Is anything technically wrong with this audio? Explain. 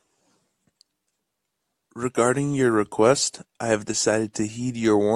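No, nothing is technically wrong with this audio.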